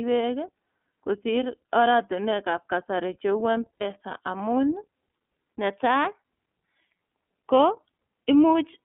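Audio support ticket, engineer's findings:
iLBC codec, whole clip: narrowband speech, band limited to roughly 250 Hz to 3.5 kHz, rough and slightly synthetic, codec damage plainly audible. The rate of 13.33 kbps points to 30 ms frame mode. Each frame is coded standalone, so there is no smearing between frames.

Lost iLBC frames, 3.75 to 3.82 s: a held, buzzy vowel-like tone for about 60 ms, which fits two dropped 30 ms frames concealed by repeating the last pitch cycle. The voice is right again almost at once afterwards, unlike predictive codecs that stay degraded after a loss.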